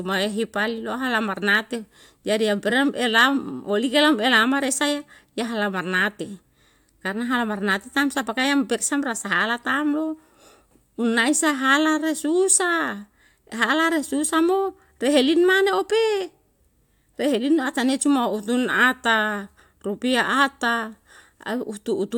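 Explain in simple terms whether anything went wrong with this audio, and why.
Nothing went wrong with this recording that I can hear.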